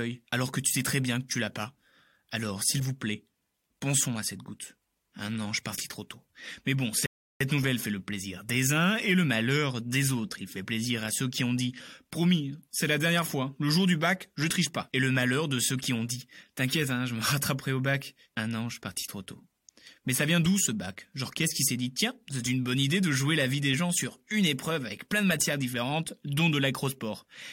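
At 7.06 s the speech stops dead for about 0.34 s, a rebuffering stall: the player exhausted its downloaded audio and paused until more arrived. Playback then resumes exactly where it halted, at "nouvelle fait le plaisir", with nothing lost, only time added.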